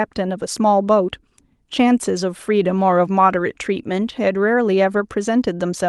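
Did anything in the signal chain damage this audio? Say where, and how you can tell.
No, nothing in the chain damaged this speech: it came through an ordinary Opus call path, so you hear the codec's usual coding texture and the top end stopping around 12 kHz, and that's just how the call sounds.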